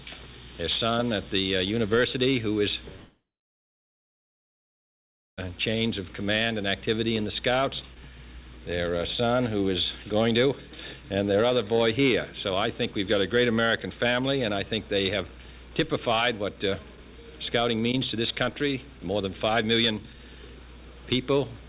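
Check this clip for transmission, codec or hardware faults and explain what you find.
There's one clear fault: a long network dropout from 2.96 s to about 5.39 s. The sound cuts out, and what you hear is the receiver stretching the last bit of audio into a brief fading buzz before it drops to near-silence for roughly 2.15 s. That's most likely a gap in packet arrival, with about 2.4 s of audio lost outright and never replayed. When sound resumes it just picks up later, with that stretch missing. Throughout, the band tops out at 4 kHz, which fits the G.711 A-law call codec.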